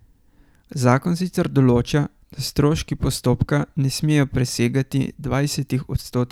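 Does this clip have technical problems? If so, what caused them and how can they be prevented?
No, nothing in this speech recording points to a technical fault, so there is no cause to trace and nothing to prevent.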